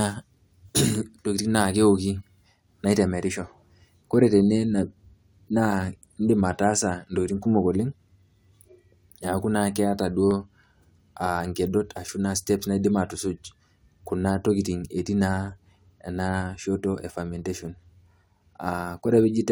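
Sharp single clicks sound at 10.31, 11.97 and 17.39 seconds in the speech. Each is likely dropped samples, with well under a millisecond missing, making the waveform jump.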